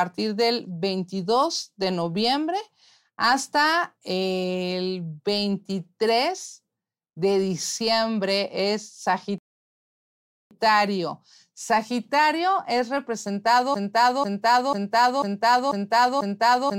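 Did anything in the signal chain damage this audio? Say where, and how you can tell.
Yes. Rebuffering stall, 9.38 to 10.51 s, at playback: the player starved for data, went silent for 1.13 s, then resumed exactly where it stopped.

Broken-record loop, 13.74 s to the end: a 0.49 s fragment repeats back to back six times, likely a stalled stream resending its last buffer, losing the intervening speech.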